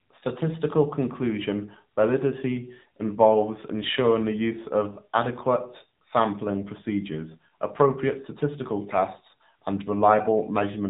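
It's a speech recording squeezed through the AMR narrowband mobile codec for the whole clip: nothing gets through above about 3.8 kHz, and the vocal-tract model running on too few pulses makes the voice plainly buzzy and synthetic, which fits a low 7.4 kbps mode.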